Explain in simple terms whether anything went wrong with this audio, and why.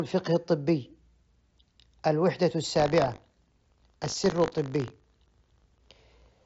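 From 2.72 s to the end, the speech picks up a robotic buzz about 50 times a second. That is buffer tearing: the program filling the audio buffer and the hardware playing it have slipped out of step. A small slice of each buffer still holds sound from roughly 40 ms earlier, so every buffer gets a hard join. Unlike random dropouts or crackle, the buzz is perfectly regular and appears only while someone is talking. The dull, slightly grainy tone of the Bluetooth mSBC headset codec is normal for a headset.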